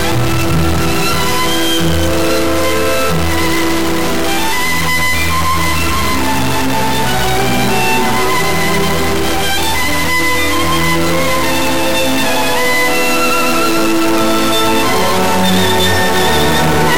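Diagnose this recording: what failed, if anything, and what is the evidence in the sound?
A stuck bit runs through the whole recording, likely at the converter or a broken data line. One bit of every sample is held at a fixed value, so about half the samples are off by that bit's weight in a pattern that follows the waveform. Small values near zero change sign against that fixed bit, so pauses fill with noise instead of going quiet. A spectrogram shows a broadband floor that never drops away. On the waveform, quiet passages look rough rather than flat.

Buffer tearing, a driver or buffer-stage fault, appears from 3.48 to 4.72 s as a buzz at 200 Hz that lasts only while signal is present. The writer and the hardware reader of the ring buffer have slipped past each other, so inside every 5 ms period a small sliver, around 2 percent, is audio from roughly 10 ms earlier, joined hard on both sides. 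The spectrogram shows vertical ticks every 5 ms, and the waveform shows matching step discontinuities.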